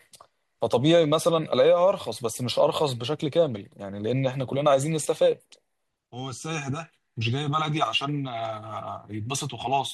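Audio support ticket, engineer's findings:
Brief rough, noisy smear in the speech at 5.03 to 5.06 s, about 22.5 ms. Cause: lost LE Audio frames on the Bluetooth link, a gap that fits three 7.5 ms frames. LC3 concealment refilled it with the last spectrum under random signs.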